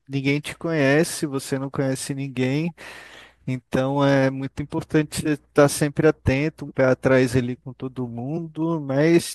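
Speech clip with two decoding faults. At 2.69 s a corrupt frame was decoded: flipped bits put energy at wrong frequencies, heard as a short error peaking around -35 dBFS, consistent with roughly two damaged frames. Compressed frames were skipped from 6.68 to 6.71 s and at 8.36 s. Each time the audio jumps ahead by about 20 ms.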